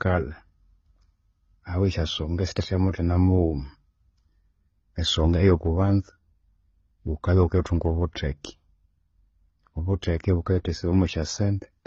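Throughout, the speech sounds dull, with nothing above 8.2 kHz and layered artefacts, likely from transcoding between lossy codecs, low-bitrate AAC-LC then HE-AAC.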